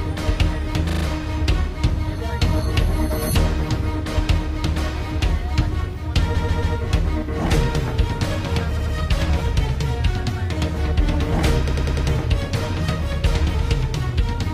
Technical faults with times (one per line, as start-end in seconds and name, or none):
0.89-1.04 repeated frames
6.34-6.75 repeated frames
8.76-8.94 repeated frames
11.68-12.07 repeated frames